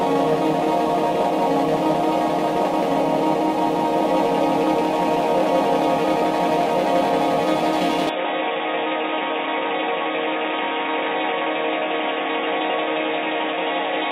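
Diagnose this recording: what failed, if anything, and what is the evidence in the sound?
Input switched to a poorer device, likely, from 8.09 s to the end: with no gap, the sound turns dull and boxy, loses everything above 3.8 kHz, drops a few dB in level and gains a faint new noise floor, pointing to a narrower-band capture device taking over at the input stage.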